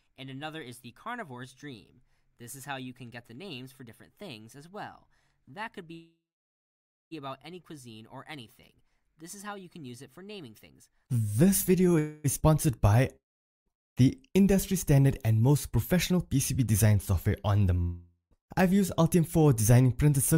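At 5.93 s there's a call audio freeze, likely from the jitter buffer running dry: the last sound smears into a fading buzz, then about 0.94 s of silence, before resuming at 7.13 s with nothing lost. Another, likely the same cause, runs 11.99 to 12.26 s, just a brief fading buzz.

A long network dropout, likely packets that never arrived, hits 13.16 to 13.68 s, leaving a short fading tail, then silence, with about half a second of audio gone.

From 15.34 to 16.93 s a jitter buffer speed-up trims tiny pitch-period slices, roughly a tenth of a second in all, so the sound runs 6% faster at unchanged pitch.

A second long network dropout, likely lost packets again, comes at 17.82 to 18.33 s: a longer fading buzz, then about 0.13 s of silence, with half a second missing.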